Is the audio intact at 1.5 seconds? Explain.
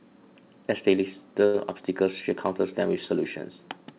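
No, a short stall from a late packet at 1.46 to 1.56 s emptied the jitter buffer, so the receiver held the last sound for about 78 ms, giving a drag with a slight buzz or dip without losing any speech.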